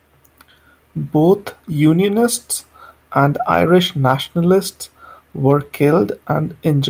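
No technical faults can be heard in this recording.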